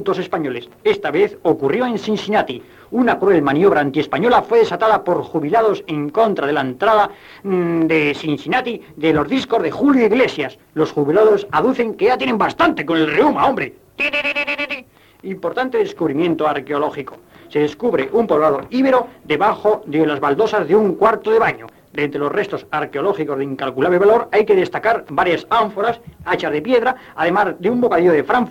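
No technical faults can be heard anywhere in the audio. At no point does anything interrupt, distort or alter the sound.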